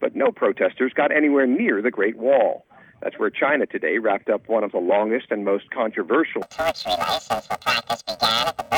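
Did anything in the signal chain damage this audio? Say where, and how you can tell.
Yes. From 6.42 s to the end, the audio turns into a robotic buzz at about 345 Hz. This is planar audio read as interleaved, a sample-format conversion fault. Each 2.9 ms block, which fits a 128-sample block, holds all left samples then all right, but is read as alternating pairs, so each half plays at double speed, one after the other. The pace stays correct and the blocks are short, so there's no clear octave jump, unlike a sample-rate mismatch.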